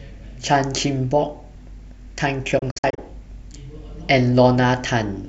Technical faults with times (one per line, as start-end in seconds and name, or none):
2.59-2.99 digital broadcast dropout